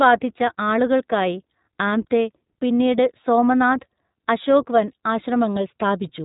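The speech was coded with the iLBC codec throughout, each short frame handled independently at a low rate, consistent with the 15.2 kbps, 20 ms mode. Nothing above 3.8 kHz survives, so the voice sounds muffled and narrowband, with a plainly audible rough, synthetic edge.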